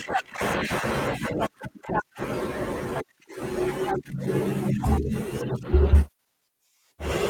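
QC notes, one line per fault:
1.49–2.11 s, 2.85–3.13 s, 3.64–4.75 s and 5.61–6.42 s, jitter buffer speed-up: the speech suddenly runs faster at unchanged pitch, by 8%, 18%, 3% and 11% respectively. The receiver's jitter buffer had built up surplus delay. It trimmed it by cutting short pitch-period pieces many times in a row. That removed a few tens of milliseconds per burst, and about a tenth of a second in the last. The speech sounds briefly hurried in all but the 3% burst, most clearly at 2.85 s.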